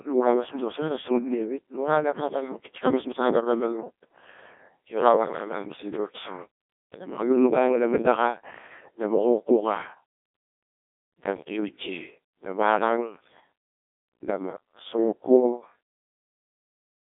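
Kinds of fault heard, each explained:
Codec 2 vocoder: speech rebuilt from pitch and envelope alone, around 1.2 kbit/s, sounding robotic and buzzy; spectrogram shows neat synthetic harmonics in a 250 to 3.5 kHz band, nothing above 3.7 kHz.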